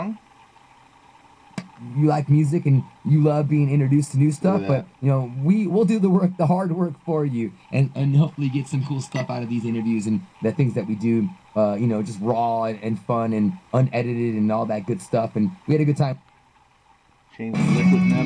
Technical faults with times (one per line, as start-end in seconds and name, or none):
none